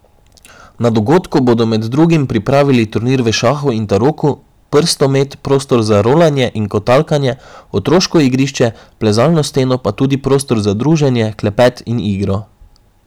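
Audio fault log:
throughout hard clipping: the speech is driven about 9 dB past full scale, so a few percent of samples are sliced flat at the ceiling. The abrupt corners spray high harmonics, giving a gritty crackle on louder syllables rather than the rounder, gentler thickening of soft saturation.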